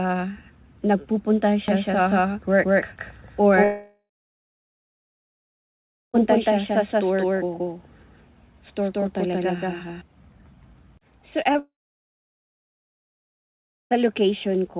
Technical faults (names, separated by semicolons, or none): doubled audio track; long network dropout; short concealed packet loss